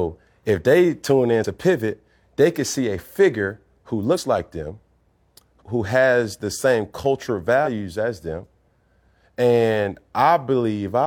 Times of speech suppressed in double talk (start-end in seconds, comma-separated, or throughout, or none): none